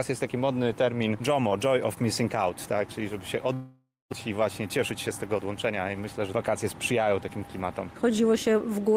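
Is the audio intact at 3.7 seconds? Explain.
No. From 3.53 to 4.14 s, a likely long network dropout: the last sound is stretched into a fading buzz, then silence, and about 400 ms is lost, unlike a brief concealed glitch.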